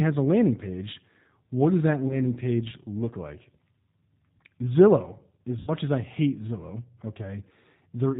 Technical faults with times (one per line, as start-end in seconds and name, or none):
0.00-8.19 G.729 codec
2.08-2.20 VoIP packet loss concealed by the speech codec
5.59-5.72 VoIP packet loss concealed by the speech codec